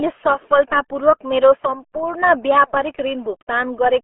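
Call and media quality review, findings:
RealAudio 14.4 codec damage, throughout. Speech muffled and gargly. Nothing above 3.8 kHz, band about 300 Hz to 3.4 kHz. Heavy coding smear fits an 8 kbit/s RealAudio 1 stream. Too few bits for detail.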